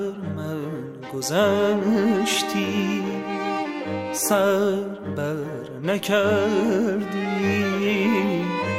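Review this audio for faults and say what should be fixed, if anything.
Nothing here needs fixing; no faults were found.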